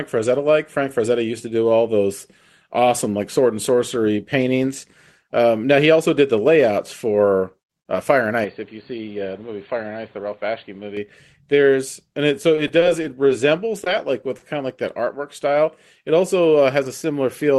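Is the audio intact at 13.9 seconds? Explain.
No. Around 13.84 to 13.88 s there is a short concealed packet loss: about 20 ms of audio never reached the decoder in time, and the receiver covered the gap by extending the preceding sound before blending back, leaving a brief smear or wobble.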